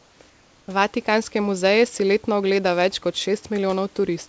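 From 0.00 to 0.20 s and again from 0.30 to 0.68 s, the room background turns into a flat, featureless hiss, about 3 dB and then 2 dB quieter: comfort noise in place of the background, likely from discontinuous transmission synthesising filler noise during the pauses.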